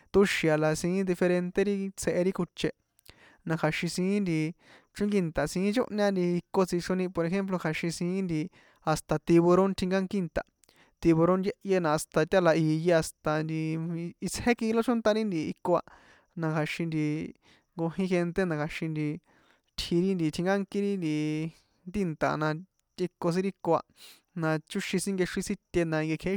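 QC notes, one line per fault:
Nothing stood out on listening to this speech clip.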